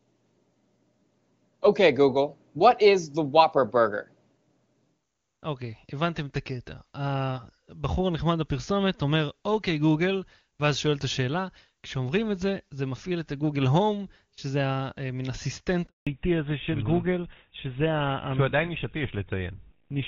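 At 15.87 s there's a handover gap: the call hops networks and no speech frames arrive while it switches. The sound cuts out within a few tens of milliseconds and stays silent for 200 ms, until 16.07 s, and whatever was said in that stretch is simply gone.

Right after, from 16.07 s to the end, you get a fallback to narrowband. Before this the HD Voice path sounds clean and full, which fits AMR-WB at its top rate of 23.85 kbit/s. Once the new link kicks in, nothing above 4 kHz survives, so the speech goes dull and rougher. That points to an older narrowband codec such as GSM full rate at 13 kbit/s.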